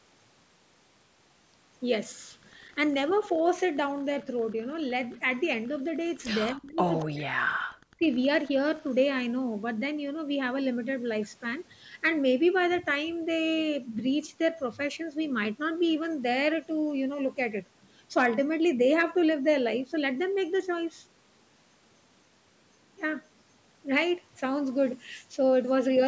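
Speech, band-limited by the call's microphone processing so that nothing reaches above 8 kHz, with three kinds of fault. The first is an echo leak, likely from a far end playing the call on a loudspeaker while its echo canceller failed to remove all of what its microphone picked up. The residue came back as a copy delayed by 234 ms. At 5.12 to 5.17 s it is a scrap around 40 dB below the speech. At 7.0 to 7.05 s it is a much plainer short burst, only around 15 dB down. In the same stretch there is speech suppressed in double talk: with both sides active, the echo canceller likely could not separate the near talker from loudspeaker echo and turned everything down. The speech dips sharply from 6.52 to 6.81 s, by something like 35 dB at its deepest. It drops again for about a second from 7.03 to 8.05 s, by roughly 40 dB, so those stretches sound gated and partly missing. Finally, hard clipping appears from 18.17 to 18.26 s. 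The signal overran the stage carrying it by about 4 dB, so its peaks were sliced flat. The flattened tops add high harmonics, heard as a brief harsh crackle on the loud part of that moment.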